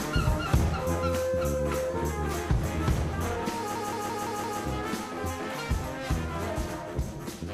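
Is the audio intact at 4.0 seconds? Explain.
No. A system hang loop runs from 3.76 to 4.61 s: the system froze while the audio hardware kept replaying its ring buffer. A 171 ms chunk, fitting an 8192-sample buffer, repeats five times at about 5.9 Hz, giving a machine-gun stutter.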